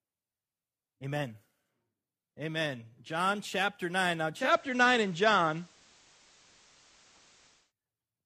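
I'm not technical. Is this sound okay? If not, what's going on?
No. Digital radio blending to analogue, 4.30 to 7.73 s: the radio lost its digital signal and faded over to FM, adding faint hiss.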